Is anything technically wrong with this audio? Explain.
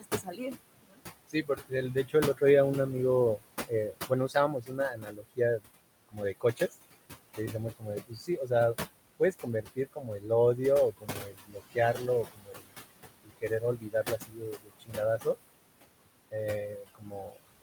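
Yes, two related faults come from the noise suppression stage.

Noise suppressor artifacts run through the whole clip. The suppressor judges which frequency bands hold steady noise and pulls them down frame by frame, here by about 20 dB. The room noise, sitting about 12 dB below the speech, therefore dips in the pauses and swells back under each phrase.

Speech cut by the noise suppressor occurs from 0.0 to 2.42 s, 3.37 to 6.74 s, 7.33 to 15.26 s, and 16.31 s to the end at 17.62 s. The suppressor mistakes quieter parts of the speech for background and cuts them with the noise, by about 20 to 22 dB at the deepest. Short stretches within each span lose level: roughly 0.7 s in the first, about a second in the second and around three seconds in the long third span. Soft consonants and word endings sound swallowed or faint.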